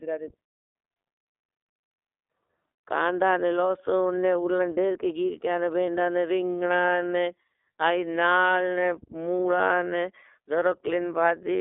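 Speech that runs through the iLBC codec for its whole length, sounding rough and plainly synthetic, with the coarse texture of the 30 ms frame mode, which points to about 13.3 kbps. On a spectrogram, energy stops sharply near 3.6 kHz, with little below 300 Hz.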